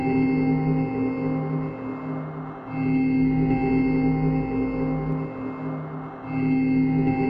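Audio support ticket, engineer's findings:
Mains hum, 3.22 to 5.12 s. Steady low tone at 50 Hz with a few low harmonics, sitting roughly 15 dB under the wanted signal. Probable component: ground loop in the cabling, or a transformer nearby. Mechanism: the power line couples into the signal path, adding a constant tone at the line frequency.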